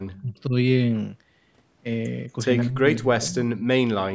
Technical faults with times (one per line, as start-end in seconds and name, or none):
0.17-0.21 echo leak
0.22-0.54 speech suppressed in double talk
2.62-4.14 speech suppressed in double talk